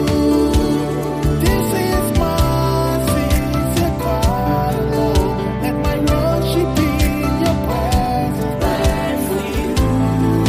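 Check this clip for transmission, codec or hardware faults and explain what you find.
No transmission, codec or hardware faults can be heard anywhere in this recording, and the signal holds steady throughout with no dropouts, distortion or interruptions in its path.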